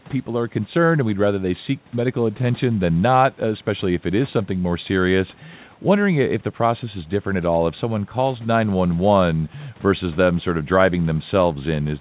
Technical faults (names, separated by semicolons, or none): none